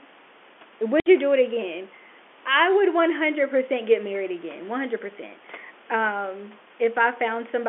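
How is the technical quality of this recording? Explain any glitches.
There's one clear glitch, on a telephone-band line where low room noise sits about 29 dB under the speech. At 1.0 to 1.06 s, just before "you do it again", there's packet loss filled with silence: a 60 ms gap, which fits three lost 20 ms packets. The receiver plays dead silence there, so the speech drops out abruptly with hard edges.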